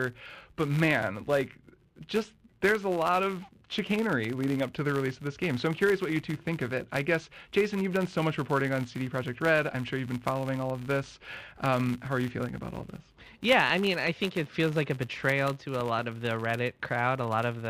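Throughout the speech a buzz near 94 Hz rises and falls with the level: a filter restarted on every block, losing its state and ticking at each boundary, which fits a 512-sample block. Unlike mains hum, it vanishes in pauses.

Between 15.80 and 16.01 s come two loud pops, peaking a few decibels above the speech, which carries on beneath them. A sudden electrical step, likely a plug, switch or static discharge, causes them. Unlike a dropout, nothing is lost.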